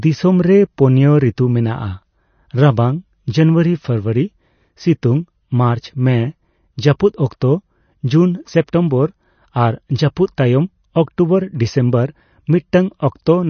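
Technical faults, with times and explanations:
Throughout, MP3 compression. The audio has a swirly, watery texture, and s sounds come out smeared and metallic. Nothing is heard above 6.5 kHz, so the top of the speech is dull and closed in. The likely cause is an MP3 encoder starved of bits, which fits a rate around 32 kbps. It cuts the treble at a fixed point. Quiet frequency detail then drops in and out between frames, which makes the swirl.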